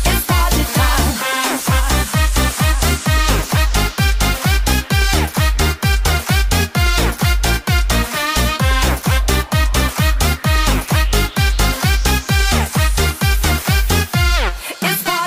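No technical faults can be heard anywhere in this audio.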